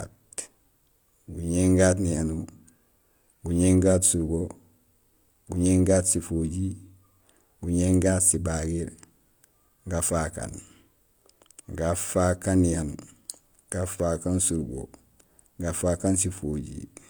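Speech runs throughout as low-bitrate audio saved at a high bitrate: the MP3 carries a generous rate and content reaching 20.2 kHz, yet the artefacts of a much lower-rate encode persist. That points to a likely earlier HE-AAC pass near 48 kbit/s, which a simple low-bitrate file would not hide behind a high rate.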